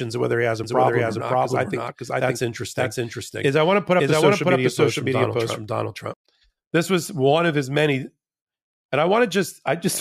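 From 0.64 s to 6.14 s the speech carries a doubled audio track: a second, equally loud copy trails about half a second behind, likely from a slower capture path. It sounds dry and overlapping, starting and stopping abruptly; spectrograms show every band repeated, shifted right.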